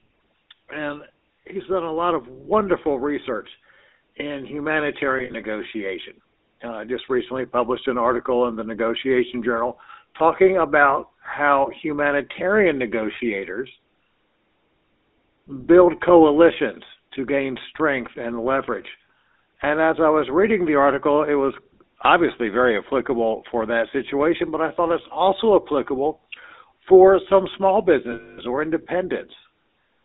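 Throughout, the GSM full-rate codec gives the speech a buzzy, gravelly roughness, consistent with a 13 kbps stream; a spectrogram shows energy confined to roughly 250 Hz to 3.7 kHz. From 5.18 to 5.35 s, lost GSM frames are patched by repeating the last good frame. About 100 ms is missing, scattered over 160 ms, with the longest gap around 70 ms. Each gap is a brief metallic ring, seen as smeared, repeated spectral bands. From 28.12 to 28.41 s, a 260 ms loss holds a rough, ringing tone.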